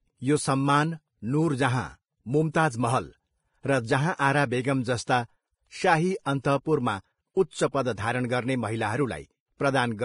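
From the start the speech is hissy and grainy, with roughened tones, consistent with heavy Vorbis compression, likely at a low bitrate near 28 kbps. A spectrogram shows nothing above 10.5 kHz and speckled, noisy upper bands where coarse quantisation replaced fine detail.

Pre-echo appears at 5.04 to 5.08 s (39 ms), 6.23 to 6.26 s, 6.42 to 6.45 s, 7.96 s and 9.57 to 9.60 s. Quantisation noise spreads ahead of each sharp attack, heard as a brief hiss and softened onset, and visible as a smear before the transient.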